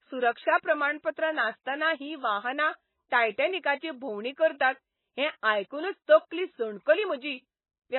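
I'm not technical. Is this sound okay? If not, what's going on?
No. MP3 compression, throughout: the speech was likely squeezed too hard, so everything above 4 kHz is gone, leaving it dull and watery.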